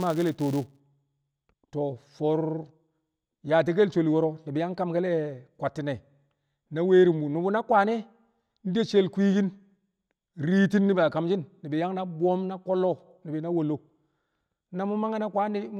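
From 0.0 to 0.8 s, a filter restarted on every block adds a 188 Hz buzz that rises and falls with the speech, unlike steady hum, which fits 256-sample blocks.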